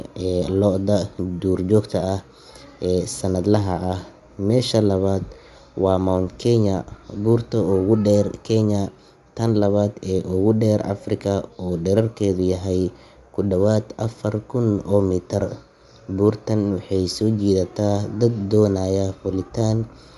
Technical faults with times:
0.00-20.18 Bluetooth LC3 compression

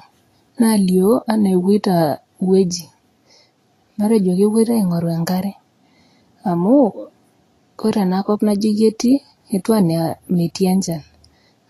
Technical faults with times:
0.00-11.70 Vorbis compression

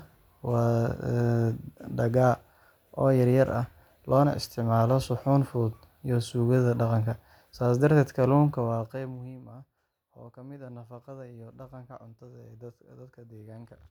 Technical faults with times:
8.41-9.40 zipper noise

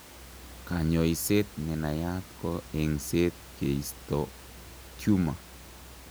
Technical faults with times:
none

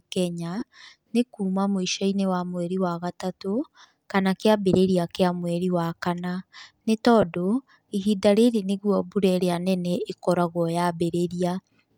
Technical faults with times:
0.60-0.63 lost LE Audio frames
7.22 lost LE Audio frames

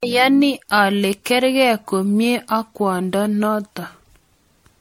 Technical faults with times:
0.00-4.80 generation loss

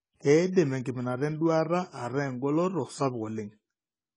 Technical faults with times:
0.00-4.16 AAC compression

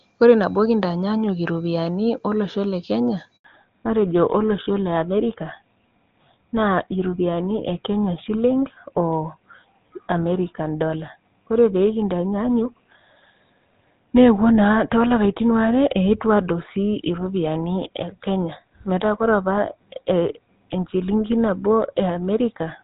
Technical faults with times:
3.36-3.44 handover gap
3.44-22.83 fallback to narrowband

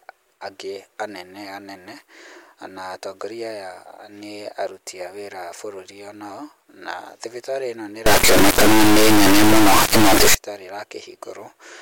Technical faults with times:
8.06-10.34 integer read as float

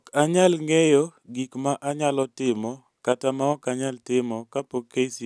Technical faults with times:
none

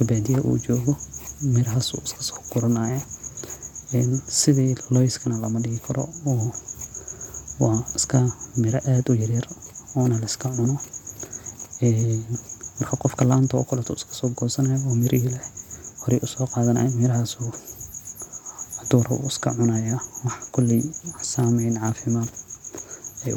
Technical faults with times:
none

